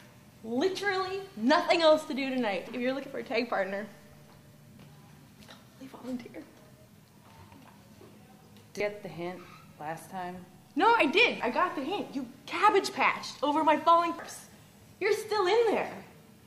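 At 2.67, 8.80, 11.40 and 14.19 s there's damaged data in the compressed stream: corrupt bytes make the decoder lose sync and hunt for the next frame, leaving a brief chirp or blip.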